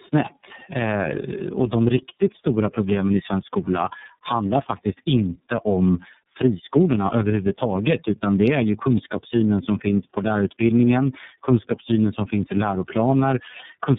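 Throughout the speech, tandem speech coding is audible: the compounded roughness and warble suggest about three low-rate speech coders in sequence, which fits G.723.1 followed by iLBC twice. Each coder re-encodes the previous one's errors. Unlike a single codec's artefacts, it sounds muffled, with nothing above 3.8 kHz, and smeared.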